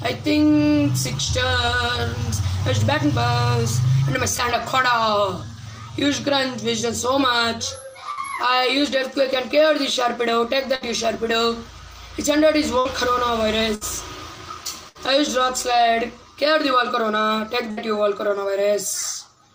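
A burst of packet loss occurs six times, at 8.11, 10.75, 12.79, 13.75, 14.89 and 17.71 s. Each time, a short run of audio failed to arrive in time and the receiver concealed it by extending the last sound for about 60 ms while fading it down. The result is a brief smeared tail, followed by a jump where about 60 ms of material is missing before normal audio resumes.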